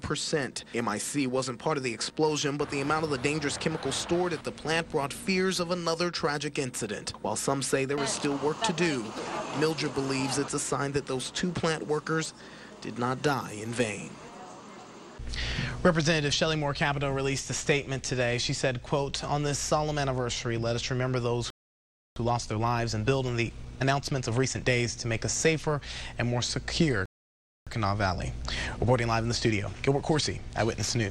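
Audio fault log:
21.50–22.16 s and 27.06–27.67 s, playback stall: The sound stops dead mid-flow for about 0.66 s, then 0.61 s. The player likely ran short of buffered data or its thread was blocked, so nothing reached the output.
22.16–24.78 s and 27.67–30.67 s, time-compressed catch-up: Each stall is followed by hurried audio at normal pitch, running at 1.25 times speed, then 1.15 times. Small pieces are cut out and cross-faded to shed the backlog.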